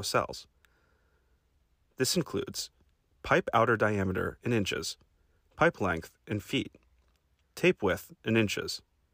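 No technical faults can be heard anywhere in the audio, and the signal holds steady throughout.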